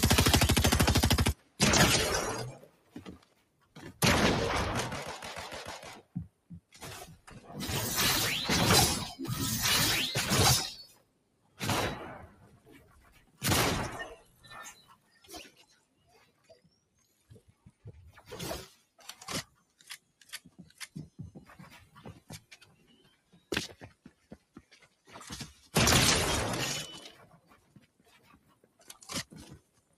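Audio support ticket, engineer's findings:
Speech-tuned noise suppressor left active on non-speech audio throughout; steady tones, ambience and tails classed as noise, so level pumps and thins, swinging by about 20 dB.

Sound cut by the noise suppressor at 1.34–1.6, 2.53–4.01, 5.96–7.5, 10.87–25.7 and 27.3–30.0 s; sustained material drops about 13–14 dB and decays are cut short while attacks pass.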